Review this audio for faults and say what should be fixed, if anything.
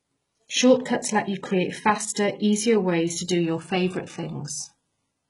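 Throughout the speech, the treble sounds synthetic: s sounds come out gritty and lispy, and nothing is present above 11.1 kHz. This is likely HE-AAC compression at a very low bitrate, around 12 kbps. Spectral band replication copies lower bands upward, so the upper harmonics fail to align with the real ones. Encode at a higher bitrate with plain AAC, or keep an uncompressed master.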